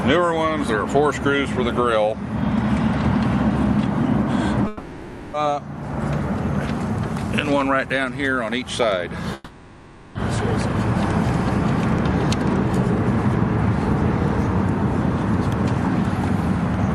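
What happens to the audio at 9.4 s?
From 9.34 to 10.16 s the sound breaks into a fading buzz and hiss. This is likely a long network dropout. For about 0.81 s no audio arrived, so the receiver kept extending the last sound. When the audio returns, that stretch is missing.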